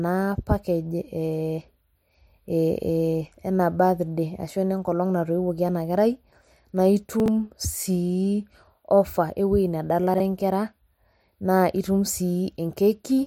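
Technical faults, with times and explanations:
7.2 to 7.28 s, chunks out of order: a 20 ms chunk of speech plays three chunks late, after the audio that should follow it. Nothing is missing, but the order is wrong. The three hard joins give a brief jumbled stutter.
10.14 to 10.2 s, chunks out of order: again a 20 ms chunk arrives late, this time by two chunks. The misplaced segment and its abrupt edges produce a shorter garbled blip.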